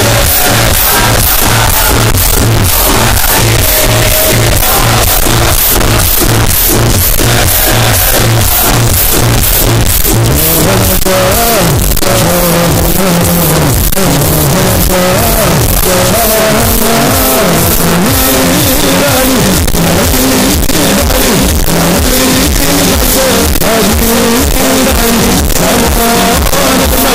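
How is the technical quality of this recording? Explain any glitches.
The technical quality is poor: the whole recording is dominated by very loud, harsh distortion. From start to finish there is a signed and unsigned mix-up in the 8-bit samples. The likely cause is that the top bit is flipped, so every zero crossing leaps across the entire range. Quiet passages therefore blast as loudly as everything else. The waveform looks slammed edge to edge, and the spectrogram shows broadband smearing to the top.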